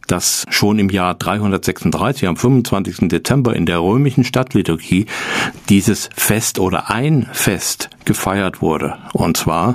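Gain pumping runs through the whole speech clip. The level swings by around 20 dB, pulled down on loud moments and let back up between them, so loud and soft passages sit unnaturally close together and the sound is squashed. This is likely from input gain set far too high with a fast limiter or compressor clamping it. Unlike a noise gate, which cuts sound off in the pauses, pumping continuously rides the level up and down.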